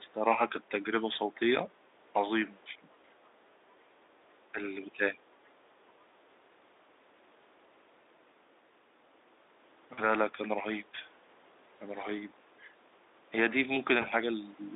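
At 1.13 to 1.16 s a single 20 ms packet went missing, and the speech decoder bridged the gap by extending its last pitch and filter at falling gain, so the sound smears briefly into a buzzy tone or coloured noise that fades. From 2.71 to 2.88 s the level sags by about 15 dB, then again at 4.52 to 4.60 s and 4.85 to 5.19 s by about 10 dB. This is likely speech suppressed in double talk, where the echo canceller mistook both talkers for echo and turned the near side down. At 9.93 to 10.00 s, 40 ms of packets were lost, and the codec's concealment stretches the sound into a longer, fading buzzy tone or coloured noise. At 14.01 to 14.07 s a further 20 ms loss produces the same short, smeared blip. All of this passes through the Speex codec's 300 Hz to 3.7 kHz band.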